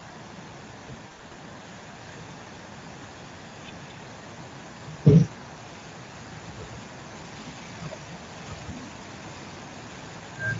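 The clip is speech, and Speex codec damage is plainly audible throughout. The codec has too few bits to rebuild the excitation cleanly, so the voice turns noisy and hoarse, and any upper band is only shaped noise. The degree of roughness points to a mid-range setting near 17 kbps. A faint echo runs through the whole clip. It trails the voice by about 0.25 s and sits very low, roughly 30 dB under the speech. The delayed copy is likely an echo leak, where a loudspeaker on the far end fed back into its microphone and the echo canceller missed part of it. From 1.07 to 1.34 s there is VoIP packet loss concealed by the speech codec. The sound smears into buzzy, fading fragments. The gaps add up to about 140 ms, scattered across roughly 240 ms. The longest single gap is about 60 ms, which fits several lost frames. The decoder filled each gap by extending its last pitch and filter at falling gain. 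The voice stays weak for a moment after the stream returns, since each new frame builds on the damaged state.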